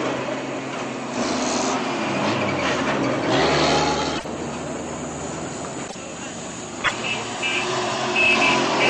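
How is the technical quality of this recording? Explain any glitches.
There's a recurring glitch: three short bursts of damaged data in a compressed stream, at 4.14–4.25 s, 5.84–5.95 s and 6.81–6.92 s. Each lasts about 0.11 s. Corrupted bytes make the decoder misread those frames and lose sync while it hunts for the next valid header, so each spot comes out as a brief glitch.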